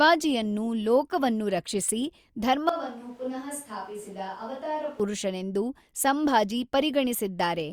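Speech, in which from 2.69 to 5.00 s the sound turns suddenly hollow and roomy, about 10 dB quieter, with thinner bass and more background noise, likely a switch to a distant microphone. The waveform visibly shrinks there, and the spectrogram shows weaker lows and a raised noise floor.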